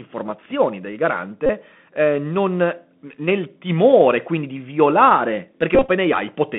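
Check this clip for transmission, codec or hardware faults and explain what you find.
The speech has passed through a Bluetooth headset link: CVSD coding throughout, plus two stretches of repeated packets.

Bluetooth CVSD headset codec, whole clip. The sound sits in a narrow band of about 150 Hz to 3.5 kHz, which fits a 64 kbps CVSD stream. CVSD codes each sample as a single up-or-down bit with an adapting step, so fast, loud high-frequency movement outruns the step. The result is plainly audible: scratchy sibilants and a grainy hiss riding under the voice. Simple band-limiting gives the dull band without that granular roughness.

Bluetooth headset packet repeated, at 1.46 to 1.49 s and 5.75 to 5.90 s. When voice packets are lost, the chip re-decodes the previous packet's bits, so a short slice of audio repeats instead of dropping to silence. The first event replaces about 30 ms, which points to roughly eight lost packets. 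The second scatters about 90 ms of loss across roughly 142 ms, with runs up to around 20 ms. In those runs the 3.75 ms repetition becomes a brief buzz near 267 Hz. That steady buzz pitch separates it from dropout gaps or random clicks.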